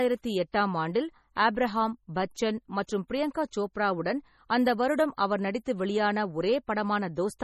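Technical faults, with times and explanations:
Throughout, MP3 compression: heavily watery, swirling sound, smeared attacks, nothing above 18.1 kHz, detail flickering unlike plain filtering, likely an encode at roughly 32 kbps.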